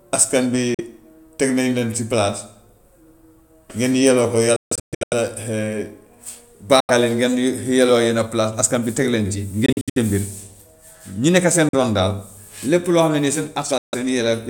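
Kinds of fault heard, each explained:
Bluetooth dropout: packets likely failed to reach the headphones in time and were discarded, so the speech cuts to silence in six gaps from 0.74 to 13.95 s, one scattered over half a second, before resuming further on as though it had kept playing.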